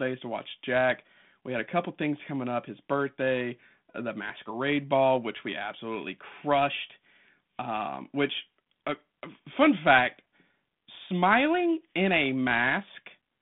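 There are no technical faults to describe in time order anywhere in this speech.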